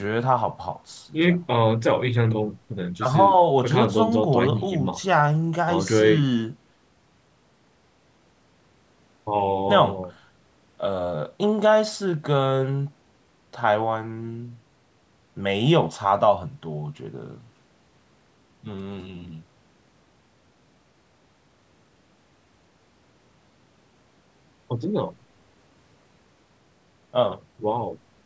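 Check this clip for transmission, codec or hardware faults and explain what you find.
No transmission, codec or hardware faults are audible here.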